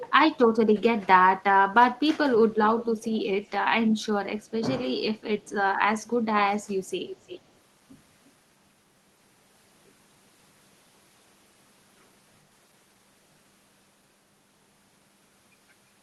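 Echo leak appears at 0.0 to 0.14 s, 2.79 to 3.22 s and 7.08 to 7.41 s: a faint, delayed copy of the speech trails behind it by roughly 370, 410 and 350 ms, sitting about 20 dB under the direct sound. The likely cause is a far end playing the call on a loudspeaker whose echo canceller let part of that playback back into its microphone. The echo comes through the call path's band limit near 12 kHz.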